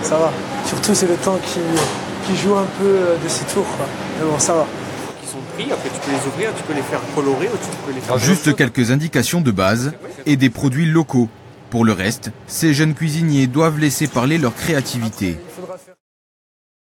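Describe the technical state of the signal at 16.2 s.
At 16.2 s the audio is intact: it sits just after a smooth fade-out has finished lowering the level, and there is no click or hard edge there.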